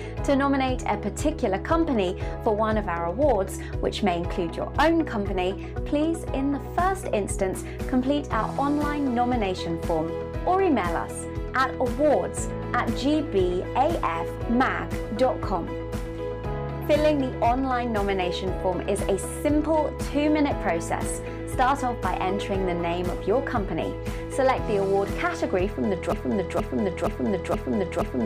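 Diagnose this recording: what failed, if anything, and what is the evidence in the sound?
A broken-record loop takes over at 26.13 s and runs to the end. A single fragment of about 0.47 s repeats back to back five times, each pass identical, with no fade between copies and no return to new material. The likely cause is a stall at the playback or buffer stage, where the device kept re-sending the last block it held, so the audio due in that stretch is lost. An echo or reverb tail would decay, and a deliberate repeat would vary; these copies stay exactly the same.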